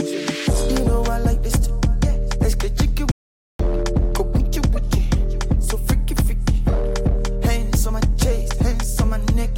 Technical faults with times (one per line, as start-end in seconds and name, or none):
3.11-3.59 audio dropout to silence